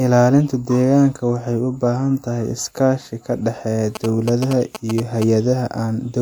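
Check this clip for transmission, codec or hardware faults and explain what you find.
One fault: GSM signalling bursts from 3.95 to 5.24 s, a galloping dit-dit-dit of short 217 Hz buzzes around 10 dB below the speech. A nearby 2G phone sending brief groups of radio bursts has been rectified by the audio circuit.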